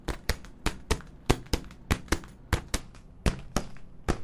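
From 2.80 s to the end, the sound drops in pitch and drags, running at about 0.73 times its proper speed and sitting roughly 5.5 semitones low, with pitch and pace falling together. This is a wrong sample rate fault: the samples are clocked out more slowly than they were captured, with no conversion between the two rates. The ratio fits 44.1 kHz material being played back at 32 kHz.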